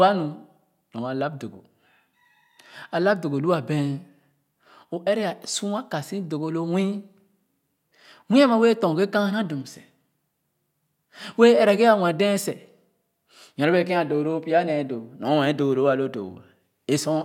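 No technical faults are audible anywhere in the recording.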